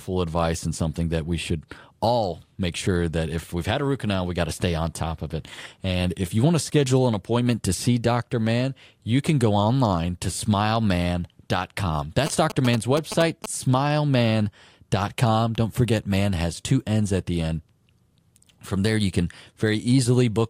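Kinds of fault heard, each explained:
GSM signalling bursts: from 12.26 to 13.46 s a nearby 2G phone's radio bursts, rectified by the audio circuit, gallop as ticks and short buzzes at about 217 Hz, roughly 5 dB below the speech. A spectrogram shows vertical ticks with harmonic combs. The waveform shows clustered spikes.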